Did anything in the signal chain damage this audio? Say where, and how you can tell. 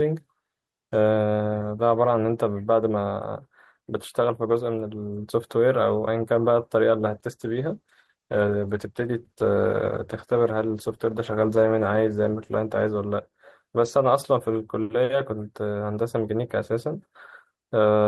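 Yes: a call bitrate drop from 7.06 s to 15.21 s, at the codec stage. The speech turns coarse and muffled as the highs vanish, worst for about 5.1 s. That fits the bandwidth estimate falling and the encoder dropping from 40 to 13 kbps.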